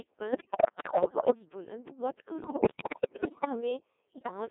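Throughout, the speech runs through a Codec 2 vocoder rebuilding the voice from sine waves, band-limited to 300 Hz to 3.6 kHz. Its heavy, robotic buzz fits a rate near 1.6 kbit/s.

Bit errors on digital voice radio, heaviest in the first burst, corrupt the vocoder's frame parameters from 0.32 to 1.35 s, 2.44 to 3.47 s and 4.16 to 4.31 s. The voice lurches in pitch and level, breaking into warbling bleeps.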